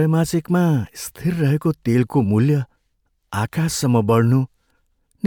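No technical faults are audible anywhere in the speech recording.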